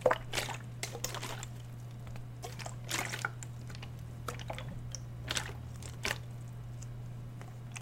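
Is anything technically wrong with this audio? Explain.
Yes. Damaged data in a compressed stream occurs from 4.71 to 4.73 s. Corrupted bytes make the decoder misread those frames and lose sync until it finds the next valid frame header, so the sound breaks into a brief blip or squawk about 20 ms long.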